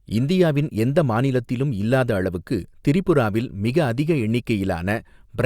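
No technical faults can be heard anywhere in the recording.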